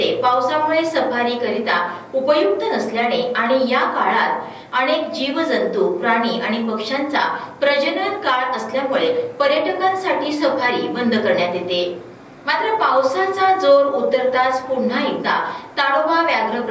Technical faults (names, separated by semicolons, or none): none